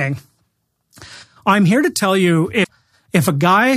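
At 2.60 s, right after "here to tell you", the speech breaks into a short glitch lasting about 0.11 s, the mark of damaged data in a compressed stream. Corrupted bytes reach the decoder, which misreads the frames there, loses sync and hunts for the next valid frame header. What separates it from a plain dropout or a single click is its cause: mis-decoded frames and lost sync in the decoder.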